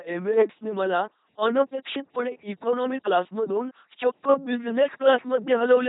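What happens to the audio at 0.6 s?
At 0.6 s the speech is running through the LPC-10 vocoder, which affects the whole clip rather than just that moment. Each instant is rebuilt from a short all-pole filter excited by either a pulse train or noise. The result is a buzzy, mechanical robot voice, with stray buzz or hiss where the voiced/unvoiced choice goes wrong. The damage is heavy, nothing sounds above 3.8 kHz, and this fits a 2.4 kbit/s coder.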